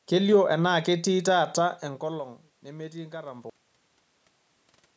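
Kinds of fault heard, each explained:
Cut-off end: the speech halts mid-sound at 3.50 s and drops straight to digital silence with no decay, unlike a fade-out or natural pause.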